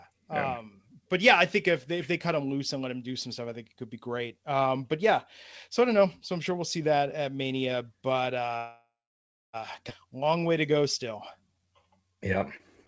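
Speech carried over a call link, with nothing audible above 8 kHz, which fits G.722 at 64 kbps. A call audio freeze runs from 8.57 to 9.56 s, likely because packets stalled and the jitter buffer emptied. The last sound is stretched into a fading fill, about 0.63 s of it silent, and the speech resumes without loss. A skip ahead at 9.89–9.93 s then drops roughly 0.7 s of speech, joining the two sides almost directly. Jitter buffer slow-down follows at 10.07–10.80 s, playing at 91% speed and adding 69 ms through repeated pitch periods. It happens again at 11.37–12.39 s at 86% speed, adding 157 ms, so the sounds are drawn out at unchanged pitch.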